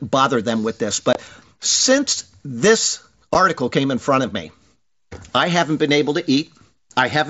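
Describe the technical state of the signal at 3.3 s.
At 3.34 s there is a single instance of unconcealed Bluetooth headset packet loss. Roughly 7.5 ms of audio vanished on the link between headset and phone, which fits one dropped voice frame. Nothing was generated to fill the gap, so the speech breaks for that instant with hard edges on both sides, producing a brief tick or dropout. The surrounding band-limited, mildly grainy character comes from the mSBC headset codec at 61 kbps.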